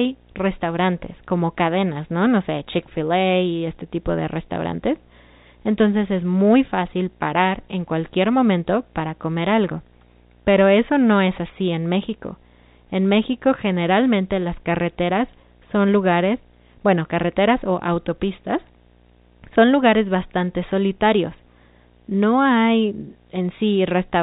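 Throughout, a 60 Hz buzz with hash above it sits about 35 dB under the speech. This is video or display buzz, where a screen's field rate couples into the audio.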